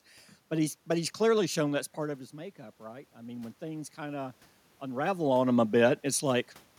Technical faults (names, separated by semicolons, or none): automatic gain rising